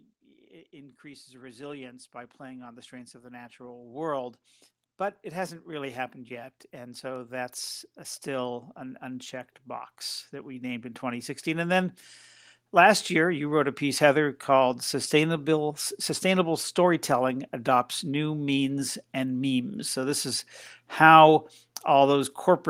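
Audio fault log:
0.19–4.45 s, 5.22–9.38 s, 10.3–12.01 s, 12.71–14.41 s: automatic gain rising. Speech and background swell together by about 9, 7, 3 and 4 dB, as the gain control slowly lifts a quiet input.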